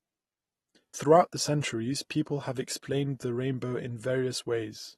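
AAC compression runs through the whole of this speech recording. It sounds dull and smeared, with nothing above about 12.4 kHz and a plainly audible warbling, fizzy texture on sustained sounds and sibilants. The likely cause is low-bitrate AAC-LC coding, which fits roughly 32 kbps and starves the quantiser of bits.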